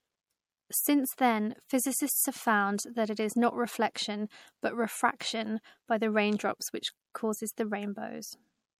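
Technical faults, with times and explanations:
Throughout: MP3 compression, likely. Codec damage is plainly audible, with weak frequency lines dropping in and out between frames as bits run short. Nothing is heard above 18.3 kHz, the encoder's fixed treble cut. The sound fits about 64 kbps.
7.12 to 7.15 s: pre-echo, just after "by the raindrops which". A short hiss comes before a sharp attack and lasts 29 ms. The attack fell late in a codec block, so noise sized for the loud part spread into the quiet before it.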